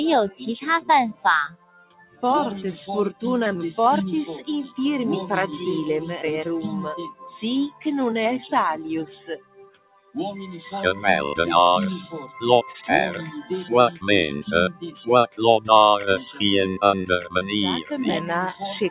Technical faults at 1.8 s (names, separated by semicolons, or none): noise suppressor applied to music or sounds; sound cut by the noise suppressor